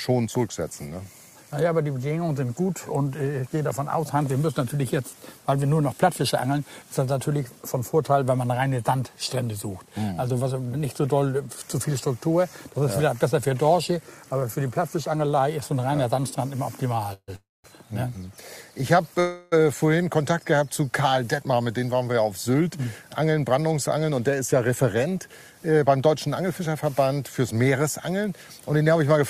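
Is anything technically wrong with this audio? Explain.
Yes, there are two kinds of fault.

Call audio freeze occurs three times: 17.13 to 17.30 s, 17.36 to 17.66 s, and 19.20 to 19.54 s. Each time the sound stalls into a fading buzz-like continuation of the last moment. The first ends in about 50 ms of silence, the second in about 200 ms, and the third fades without going silent. The likely cause is late-arriving packets draining the jitter buffer, with the receiver extending the last audio until they arrive. The sound then resumes where it stopped, so nothing is lost, but 144, 283 and 317 ms of delay are inserted. On a spectrogram each event shows smeared, repeating harmonic bands that thin out, and the first two then show a blank strip before normal content returns. The waveform shows a decaying repetitive envelope.

Jitter buffer speed-up runs from 21.43 to 24.69 s. Here the buffer had built up extra delay, and the receiver trimmed many short pitch-period slices to drain it. 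Playback runs at about 108% speed with pitch unchanged, so the sound seems slightly rushed, and roughly 0.3 s is cut in total. On a spectrogram harmonic spacing stays the same while events sit closer together in time. The waveform shows compressed timing with tiny splice points.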